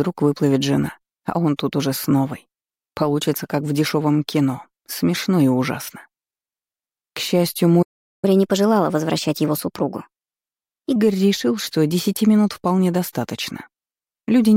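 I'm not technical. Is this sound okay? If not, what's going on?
No. At 7.82 s the sound cuts out and there is silence for about 0.4 seconds, until 8.25 s, when it picks up again. This is a playback stall: the player most likely ran short of incoming audio, or was briefly held up by something else on the device, so it had nothing to send to the speakers and simply went quiet until the data arrived.

Right after the gap, from 8.25 s to 10.96 s, everything plays a bit fast and sounds slightly higher, roughly two semitones up, before settling back to normal. This is catch-up at higher speed: having fallen behind during the pause, the player runs the waiting audio at 1.15 times normal speed to make up the lost time. Because it simply speeds the sound up, the pitch rises along with the tempo.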